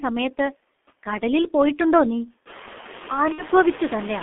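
From the first moment the speech sits in a narrow phone-line band, roughly 250 Hz up to 3.5 kHz. It's heavily worked over by what sounds like the G.723.1 codec, and the very low-rate, muffled, hoarse quality fits something around 6.3 kbit/s. The coder rebuilds the voice from a coarse model refreshed only every 30 ms or so, so consonants smear together and the whole thing has that rough, boxy telephone grain.

Running alongside that for the whole clip are noise suppressor artifacts. The suppressor pulls the background down by about 6 dB in the gaps, then lets it come back up under the voice as it decides, band by band, what counts as steady noise. That pumping gets easier to hear after the room noise steps up by about 15 dB around 2.5 s. From there the room sits only about 19 dB below the speech.

Then from 3.32 to 3.43 s there's VoIP packet loss concealed by the speech codec. About 60 ms of audio went missing, which fits two codec frames. 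The decoder covers the hole by stretching its last pitch and filter settings into a buzzy tone or coloured noise that fades, and because each frame leans on the one before, the voice stays weak and bent for a short stretch after real packets arrive again.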